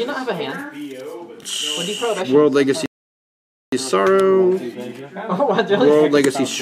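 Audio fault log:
2.86 to 3.72 s, rebuffering stall. The sound stops dead and the clip falls silent for about 0.87 s. Then it picks up again at the exact point where it broke off. No audio is skipped or repeated. The gap is simply inserted time. This happens when the player has used up everything it downloaded. It has to wait for more data before it can continue, so the silence is pure waiting.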